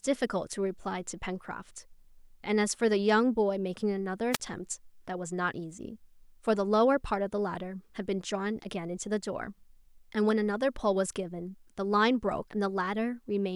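At 4.31 s the speech suffers a wireless microphone squelch dropout lasting until 4.40 s. The analogue FM radio link fades, hiss briefly rises, then the receiver's squelch mutes the output for about 34 ms, leaving a short hole before the signal returns.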